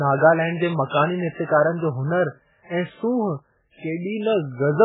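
Speech, likely put through heavy MP3 compression at a very low bitrate throughout, which cuts everything above 3.8 kHz and leaves a dull, watery, swirling sound with smeared attacks.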